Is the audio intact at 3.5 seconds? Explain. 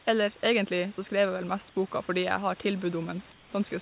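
No. From 3.32 to 3.53 s, about 210 ms, the real room background gives way to a flat, featureless hiss about 5 dB quieter, with none of the texture of the surrounding room noise. This is likely comfort noise in place of the background: during the pause the sender's voice detector stopped transmission, and the receiver filled the gap with synthetic noise shaped only roughly like the background, band-limited like the rest of the call audio to 4 kHz.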